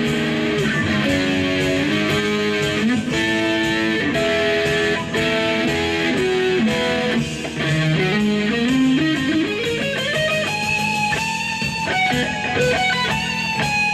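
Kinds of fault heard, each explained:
No technical fault can be heard anywhere in the signal.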